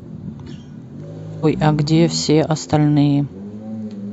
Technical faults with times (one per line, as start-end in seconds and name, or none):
1.40-1.45 stream segment skipped